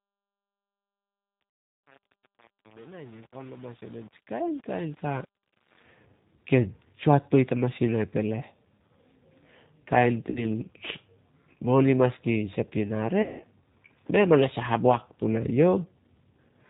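From the start to 5.83 s, the speech fades in with truncation distortion on the fade: too few bits, which fits roughly 7-bit resolution, leave the quiet early part gritty. On the waveform it shows as coarse square steps rather than smooth curves.

Throughout, the sound has a G.729 codec character, which fits 8 kbit/s G.729A. It is plainly rough and synthetic, and the spectrogram shows nothing above 4 kHz.

The clip has VoIP packet loss concealed by the speech codec at 1.53 to 1.59 s, 10.30 to 10.46 s and 13.22 to 13.43 s. In each case the decoder stretches the last sound into a fading buzzy tone or coloured noise. On the spectrogram these appear as smeared, repeated harmonic bands.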